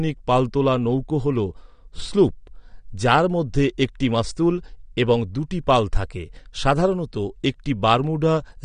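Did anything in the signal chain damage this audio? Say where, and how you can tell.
Yes, the codec stage damaged this speech, and the damage runs through the whole clip. Nothing reaches above 9.7 kHz, and what remains sounds dull and smeared, with a plainly audible warbling, fizzy texture on sibilants and held sounds. This is likely AAC compression, AAC-LC at a low bitrate that fits around 32 kbps. The encoder starves its frequency lines of bits, leaving spectral holes and substitute noise. A simple low-pass filter would cut the top as cleanly but without that swirling texture.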